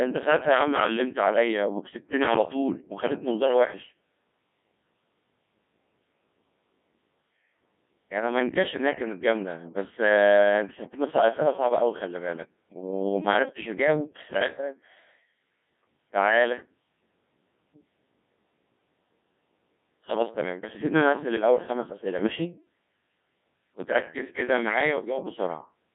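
Throughout, the speech carries heavy Codec 2 vocoder damage, resynthesised from sine waves at a rate near 1.6 kbit/s: robotic, buzzy, band-limited to 150 Hz–3.6 kHz, not warbly like waveform codecs.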